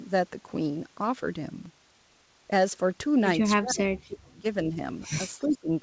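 At 1.66 s a block of digital silence only about 5 ms long went out in place of the speech. Because the signal drops straight to zero and returns with no fade, each edge produces a step, and the two steps are so close together that they merge into a single sharp tick rather than an audible gap.

From 3.58 to 4.45 s, and again from 5.38 to 5.70 s, the talker's level is pulled down hard, most likely by speech suppression during double talk. With the far side talking at the same time, the echo canceller could not tell its own talker from the loudspeaker echo and attenuated everything. The first dip is the deeper one, reaching about 35 dB, so the voice largely disappears in pieces for nearly a second. The second reaches about 15 dB and sounds more like the speech thinning and sagging briefly.

Inside that second dip, between 5.52 and 5.58 s, a faint delayed copy of the voice comes back. This is likely an echo leak, where the far-end canceller let some of the loudspeaker pickup through. 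It arrives 336 ms late at roughly 25 dB below the speech, so it registers as a brief ghostly scrap that is band-limited like the rest of the G.722 path, with nothing above 8 kHz.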